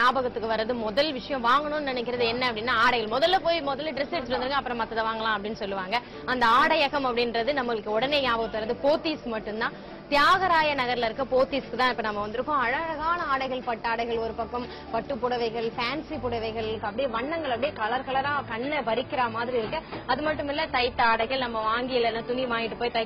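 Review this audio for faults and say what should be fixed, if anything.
At 16.72 s the sound turns abruptly dull, with nothing above 5.1 kHz, and stays that way to the end, with no gap at the switch. This is an adaptive stream at a lower bitrate: the player dropped to a lower-quality rendition, probably because throughput fell, and the thin top end fits a switch from about 96 kbit/s AAC down to about 16 kbit/s. To prevent it, buffer more ahead of playback or set a higher minimum rendition so brief slowdowns don't force the drop.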